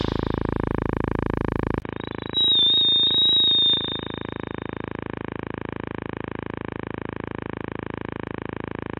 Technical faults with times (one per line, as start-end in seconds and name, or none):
1.80-8.99 input switched to a poorer device